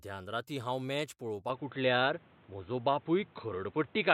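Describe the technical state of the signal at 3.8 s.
At 3.8 s the sound is band-limited, with nothing above 4.1 kHz. Since just after "हांव मॅच" at 1.50 s, it has been dull, boxy, about 5 dB different in level, and carrying new noise about 30 dB down. The likely cause is an input switched to a poorer device.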